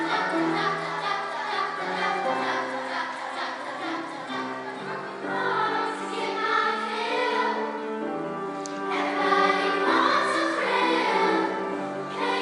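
No technical faults can be heard anywhere in the recording.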